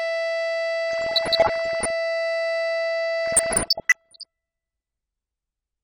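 Throughout, the music sounds dull and carries a gurgling, granular grit, plainly audible as MP2 compression. The likely cause is MPEG Layer II coding at a low rate, around 80 kbps, which starves its sub-bands of bits, so upper bands drop out and the rest are coarsely quantised.

From 0.91 to 1.90 s and again from 3.26 to 4.26 s, short blips of noise in single sub-bands break into the music. This is DAB burbling: bit errors, somewhat under 1% in the first stretch and about 1% in the second, slip past error correction and corrupt samples, putting short noise blips into individual sub-bands.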